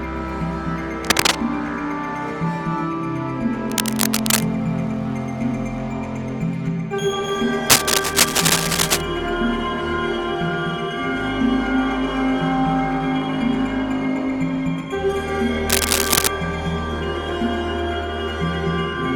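Bursts of cable scratch noise occur at 1.01–1.35, 3.70–4.44, 7.70–9.01 and 15.69–16.28 s, roughly as loud as the sound or slightly louder. They are likely from a worn connector whose contact resistance fluctuated. They appear as ragged, broadband vertical smears on a spectrogram and jagged spikes in the waveform.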